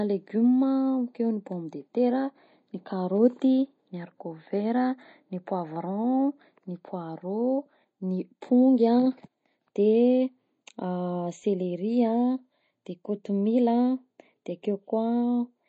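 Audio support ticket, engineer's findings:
Speech sounds watery and swirly for the whole clip, and the s sounds come out metallic and chirpy. Likely cause: MP3 compression at a low bitrate, which fits something around 32 kbps. Nothing above 8.3 kHz, so the encoder's hard treble cut is clearly there. Starved of bits, it zeroes the weak frequency lines, which then flicker on and off between frames. That flicker is the swirl, and the damage is plainly audible.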